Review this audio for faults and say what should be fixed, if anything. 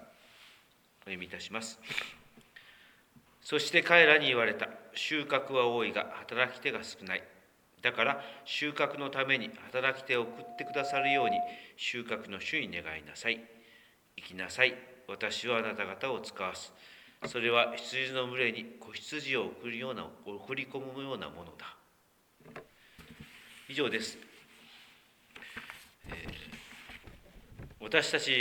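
From 10.25 s to 11.67 s there is a loudspeaker feedback squeal: a steady tone at 707 Hz that swells over about a second until it sits a few decibels above the rest of the sound. A microphone is picking up the loudspeaker it feeds, and at 707 Hz the loop gain around that path exceeds unity, so the tone keeps reinforcing itself until the loop is broken. To prevent it, reduce monitor gain, increase mic-to-speaker distance or directionality, and notch 707 Hz.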